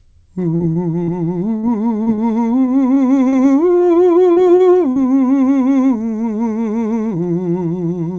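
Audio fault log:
0.56–3.35 s: repeated packet loss (robotic sound). Nine gaps, the longest 42 ms, were patched by extending the preceding music, so about a tenth of this stretch is filled in and the music sounds choppy.
4.32–4.39 s and 4.92–4.99 s: short concealed packet loss. Each time about 40 ms of music never arrived and was replaced by a continuation of the last sound, which leaves a brief smear.
4.56–4.63 s: short stall from a late packet. The jitter buffer ran dry, so about 33 ms of sound was held until the packet arrived. Nothing is lost, but a note is briefly drawn out.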